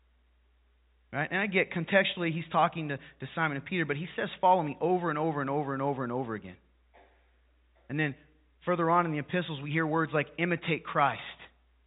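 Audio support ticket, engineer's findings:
Nothing stood out on listening; the speech comes through as ordinary G.711 telephone audio with nothing above 3.8 kHz.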